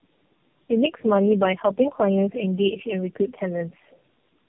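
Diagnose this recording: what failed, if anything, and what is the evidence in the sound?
Codec stage, tandem speech coding: throughout the speech, nothing reaches above 3.4 kHz, and the sound is rough, muffled and warbly. That fits three low-rate narrowband coders in a row, each re-encoding the previous coder's degraded output, which compounds the artefacts.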